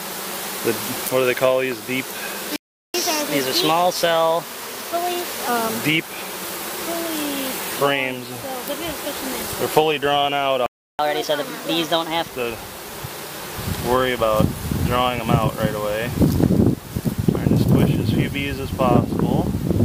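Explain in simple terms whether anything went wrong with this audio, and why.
The sound cuts out twice, from 2.56 to 2.94 s and from 10.66 to 10.99 s, about a third of a second or a little more each time. This is a playback stall, most likely the player running out of data. Unlike a dropout, nothing is lost: the audio picks up where it stopped.

Each stall is followed by catch-up at higher speed. From 2.94 to 5.48 s the audio runs 1.15 times faster, about two semitones higher, and from 10.99 to 12.31 s it runs 1.25 times faster, about four semitones higher. The player is rushing to recover lost time. Speed and pitch rise together and then settle back, which sets this apart from a steady pitch error.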